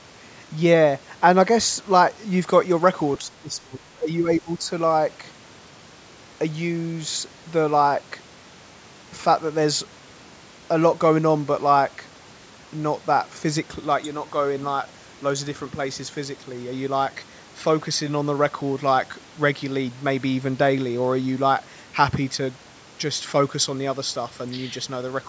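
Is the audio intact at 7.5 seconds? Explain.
No. From 2.41 s to the end, pre-emphasis was left on: a 50/15 µs treble boost went unmatched by the corresponding de-emphasis, lifting high frequencies relative to 1 kHz on a curve that reaches about 8 dB at 10 kHz, though the speech here stops at 8 kHz. At 7.5 s the speech sounds thin, bright and sibilant.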